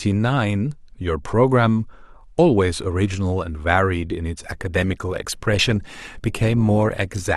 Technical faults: adaptive stream at a lower bitrate

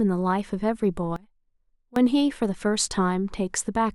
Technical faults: one channel inverted

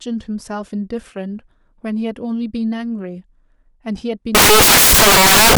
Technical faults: samples built from the wrong bytes

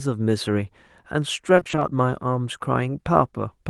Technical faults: repeated packet loss (robotic sound)

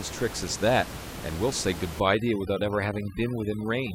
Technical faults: overdone noise removal

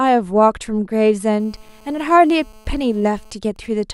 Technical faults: GSM phone buzz; GSM signalling bursts

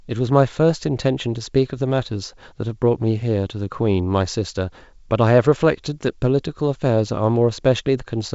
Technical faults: none

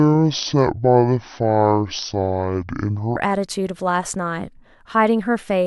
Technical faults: section at the wrong speed

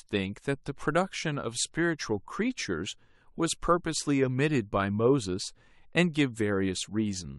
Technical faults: none

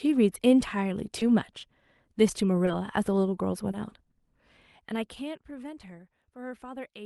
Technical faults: short concealed packet loss; zipper noise

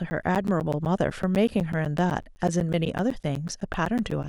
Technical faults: periodic USB or driver dropouts

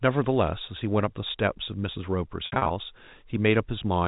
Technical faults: packet loss with pitch repetition

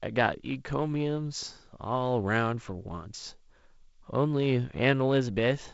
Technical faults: none

